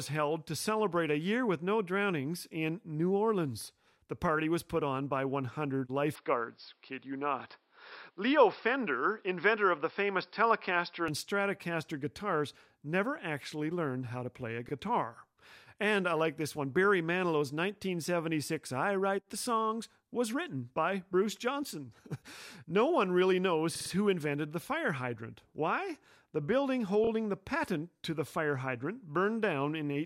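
From 6.15 s to 11.08 s the input switched to a poorer device, likely a change to a different microphone or a headset's call profile. The sound suddenly turns dull and boxy because nothing above 5.4 kHz gets through, and a faint new background noise sits far below the speech, around 45 dB down. There is no gap at either switch and the loudness stays about the same, so the change shows up only in tone and bandwidth until the full range returns at 11.08 s.

Repeated frames cause three stutters. At 14.68 s a 26.1 ms block, which fits a single compressed frame, plays once more and adds 26.1 ms. At 23.75 s a 52.2 ms block, which fits two frames, plays three extra times and adds 156.7 ms. This is the longest stutter. At 27.04 s a 26.1 ms block plays twice more and adds 52.2 ms. In each case the decoder gets the same compressed data again and plays that slice of sound over, so the clip grows longer by the repeated time.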